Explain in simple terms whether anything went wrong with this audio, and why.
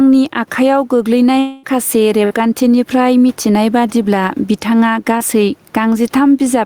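Several things went wrong, all typical of a weak or unsteady call connection and an over-eager microphone level.

Throughout the clip there is gain pumping. Loud and quiet moments end up at similar levels and the speech sounds squashed. The likely cause is a microphone level set far too high, with an automatic limiter repeatedly yanking it back down on each loud sound. Unlike the dropouts below, this never interrupts the audio; it is a constant breathing of the level.

From 1.39 to 1.65 s there is a long network dropout, likely caused by a quarter of a second of audio failing to arrive. The receiver covered the whole gap by stretching the last sound into a fading buzz or hiss. The audio never drops to full silence here, but the speech resumes further on with that stretch simply gone. Its length is what sets it apart from the shorter losses.

From 2.25 to 2.32 s a burst of packet loss removes a few hundredths of a second of speech. 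The last sound is held and turned down as the gap runs on, then the speech picks up slightly later than it should. It is much briefer than the dropout at 1.4 s, so it comes across as a quick held buzz or fading hiss rather than a long gap.

Around 5.18 to 5.22 s there is short concealed packet loss: only about a fiftieth of a second never arrived. The receiver patched it by continuing the last sound and blending back into the real speech, so it comes across as just a tiny smear or wobble.

The faint room noise heard in the background belongs to the recording space and is not a fault.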